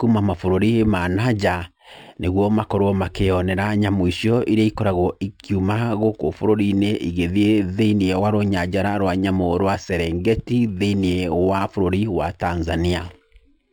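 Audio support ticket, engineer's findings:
Imaging from linear upsampling, throughout. Top end dulled above about 6 kHz, faint mirror-image band from 6 to 12 kHz around 35 dB down, light metallic shimmer on sibilants. Fits a 12 kHz source raised to 48 kHz by straight-line interpolation.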